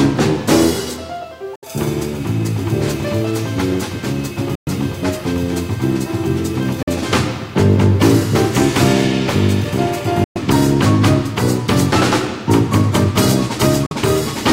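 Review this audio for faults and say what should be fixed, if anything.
Audio packets likely failed to reach the headphones in time, a Bluetooth dropout. The output cut to silence at 1.56 to 1.65 s, 4.55 to 4.68 s, 6.83 to 6.89 s, 10.24 to 10.38 s and 13.86 to 13.93 s. Each hole lasted between 46 and 116 ms, and the sound resumed further along, as though it had kept playing through the gap. To prevent this, keep the source device close to the headphones and away from 2.4 GHz interference, or use a more robust, better-buffered link.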